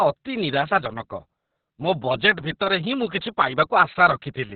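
Throughout, heavy Opus voice compression in narrowband SILK mode, fitting a rate near 6 kbps, removes everything above 4.4 kHz and leaves the speech muffled, hoarse and slightly robotic.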